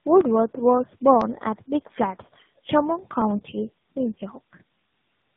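From start to finish the speech sounds rough, muffled and warbly, with nothing above 3.8 kHz. This is tandem speech coding: the call appears to have passed through three speech codecs in a row, consistent with GSM full rate twice and finally AMR-NB at 10.2 kbit/s, with G.711 links between them. Each border decoded and re-encoded the audio, so every coder worked on the previous one's damage and the artefacts piled up.

Between 0.21 s and 5.22 s, regular ticks break into the speech roughly once a second, about seven in all, audible only where there is signal. These are periodic USB or driver dropouts: something repeatedly stalled the USB bus or audio driver at a steady interval of about 1 s, and each time around a millisecond of audio was skipped outright. The signal then jumps straight across the gap, producing a click.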